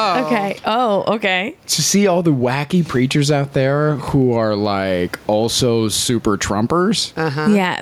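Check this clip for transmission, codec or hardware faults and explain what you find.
One fault runs through the whole recording: gain pumping. Gain pumping, throughout: the input gain is likely set far too high, so a fast limiter clamps down on each loud syllable and releases in the pauses. The level swings by around 15 dB, and the faint room noise sits about 40 dB below the speech, leaving the speech squashed and flat in dynamics.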